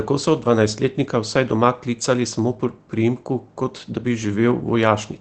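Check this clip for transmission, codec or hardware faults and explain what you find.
One transmission fault is audible: a lost packet rebuilt from error correction, from 0.41 to 0.47 s, near the start of the speech. Two separate packets appear to have gone missing. The packets that followed each carried a low-bitrate backup copy, and the decoder played those copies instead, so about 40 ms of audio was rebuilt rather than dropped. That length fits two 20 ms frames.

Because the decoder played the backup copies, the sound has no gap or click. Since those copies are coded far more coarsely, it turns briefly grainy and noisier, a short roughness in the voice texture. On a waveform the envelope stays continuous with no dropout to silence. On a spectrogram the harmonics in that 60 ms window look smeared and less distinct, with a noisy haze between them.

The call path itself, heard as speech band-limited to about 8 kHz by the call codec, shows its ordinary coding character.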